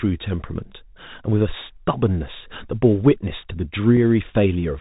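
A speech recording passed through the Bluetooth CVSD headset codec, which encodes each sample as a single up-or-down bit with an adaptive step size, consistent with a 64 kbps narrowband link. The damage is plainly audible: nothing above 4 kHz survives, loud high-frequency sounds outrun the step and distort, sibilants turn scratchy, and a granular hiss sits under the speech throughout. At about 3.97 s the headset link dropped what sounds like a single voice packet, leaving an unconcealed Bluetooth headset packet loss. The resulting 3.8 ms hole has abrupt edges, and the CVSD decoder then recovers from a momentarily lower level.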